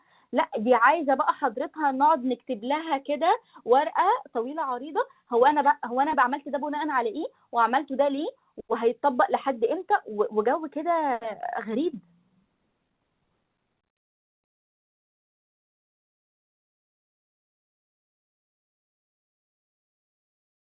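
Nothing stood out on listening to this speech recording, which came over a call line with nothing above about 4 kHz, which fits G.711 mu-law at 64 kbps.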